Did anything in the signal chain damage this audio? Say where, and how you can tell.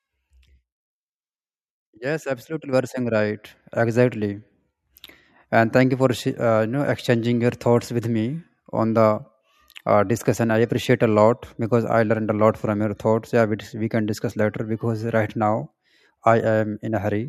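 Yes: at 2.73 s the speech and background jump up together by about 6 dB, a microphone volume stepped up by call processing raising the device's input gain.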